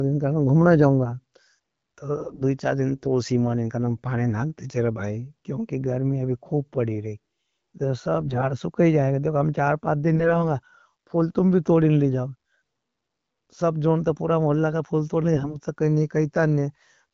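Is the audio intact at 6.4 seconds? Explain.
Yes, the speech at 6.4 seconds is intact, with no fault at that moment, only the ordinary sound of the AMR wideband (HD Voice) codec at 12.65 kbit/s.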